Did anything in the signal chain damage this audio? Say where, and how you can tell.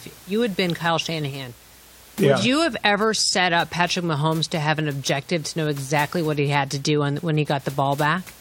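No, nothing in the signal chain stood out on listening; the faint room noise, about 24 dB below the speech, belongs to the recording space.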